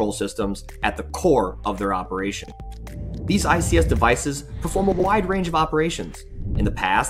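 At 2.44 s and again at 4.92 s, chunks out of order: 40 ms blocks play swapped, one chunk late through 2.52 s, then two chunks late through 5.04 s. Each jumbled moment has three hard joins, visible as waveform steps and thin vertical broadband lines on a spectrogram.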